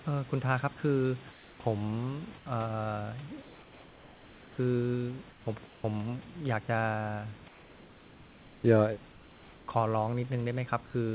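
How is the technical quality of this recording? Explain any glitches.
Speech on a call path band-limited to 4 kHz, with one recurring fault in the speech pauses: comfort noise in place of the background at 1.32–1.6, 2.38–2.46, 3.42–4.58, 5.3–5.46, 5.66–5.84, 7.48–8.64, 9.12–9.68 and 10.86–10.94 s. The real room noise gives way to a flat, featureless hiss about 2 to 4 dB quieter, likely because discontinuous transmission stopped sending and the receiver synthesised the noise.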